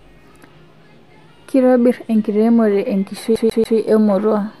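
From 3.36 s to 3.78 s the speech gets caught in a CD stuck on one turn. A scratch keeps knocking the laser back one track at the same point of each revolution. So a fragment of about 0.14 s plays three times in a row. Each jump back leaves a brief mute. The result is a quick, regular stutter, the familiar sound of a skipping disc.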